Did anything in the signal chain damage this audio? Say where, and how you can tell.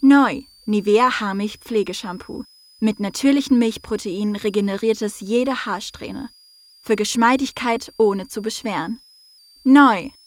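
Yes. A thin high whistle near 5 kHz, drifting between about 4.4 and 5.2 kHz, sits roughly 30 dB below the audio for the whole clip. This is switching supply whistle: a power supply in the analogue stage switching in an audible burst mode or beating with another supply, its pitch wandering with load.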